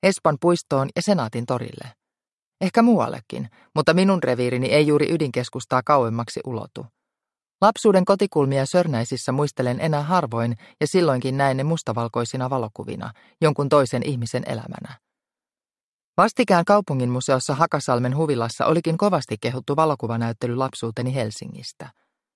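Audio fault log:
Nothing stood out on listening to the recording.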